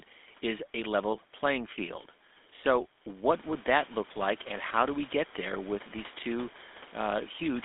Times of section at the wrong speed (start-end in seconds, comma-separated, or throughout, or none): none